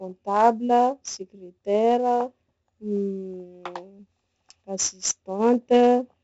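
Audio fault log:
throughout 4-bit ADPCM compression: gritty hiss riding every loud syllable, with heavy smearing on attacks; spectrogram shows level-tracking broadband noise and nothing above 7.7 kHz, suggesting 64 kbps at 16 kHz.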